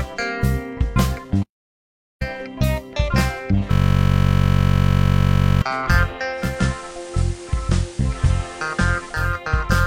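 The audio drops out from 1.43 to 2.22 s, going silent for about 0.77 s before resuming, likely a playback stall where the player ran short of data or its thread was blocked. From 3.72 to 5.62 s a system hang loop sets in: the machine froze while the sound hardware kept replaying its ring buffer, so one 21.33 ms slice repeats as a steady 46.9 Hz buzz, which fits a 1024-sample buffer. From 6.31 to 9.39 s the receiver is digital radio blending to analogue FM, cross-fading over 323 ms: the level drops about 1 dB, and hiss rises to roughly 20 dB below the signal.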